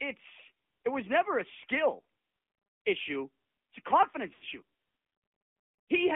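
The whole recording has passed through the AMR narrowband mobile codec. The signal was sampled at 8 kHz and rebuilt from a vocal-tract model driven by a handful of pulses per subframe, and the line carries only roughly 250 Hz to 3.5 kHz. The speech sounds thin and boxy, with no air above 3.5 kHz. The coding damage is plainly audible as a buzzy, synthetic edge, which fits one of AMR-NB's middle modes around 10 kbps.

From 4.34 to 4.44 s there are lost AMR speech frames: 80 ms of audio failed to arrive intact, which points to four consecutive 20 ms frames being discarded. The decoder filled the gap by repeating the last good pitch and vocal-tract settings at falling gain. For that tenth of a second the speech smears into a drawn-out, fading buzz that sinks toward silence, then returns weak and rough for a moment before settling.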